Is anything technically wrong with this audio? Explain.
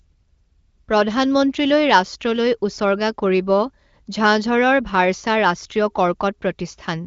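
No, nothing's actually wrong here; it's simply a wideband call carried by the AMR wideband (HD Voice) codec at a comfortable 18.25 kbit/s, which is why the top end stops at around 7.1 kHz.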